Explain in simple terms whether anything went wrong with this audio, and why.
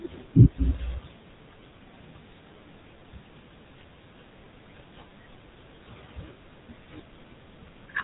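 The speech has been through the GSM full-rate codec, the compression used by early mobile phones, and it stays that way for the whole clip. The codec rebuilds the voice from a simple model of the throat and mouth, driven by a thin, evenly spaced pulse signal, so the speech comes out buzzy and gravelly, and plainly so. It also cuts off everything above about 3.8 kHz, which makes the sound narrow and phone-like.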